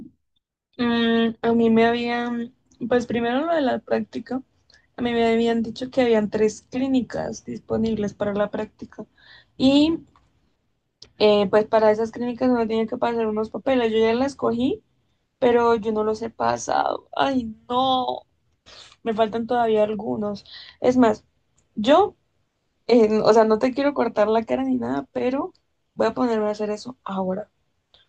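Speech recording, no audible faults.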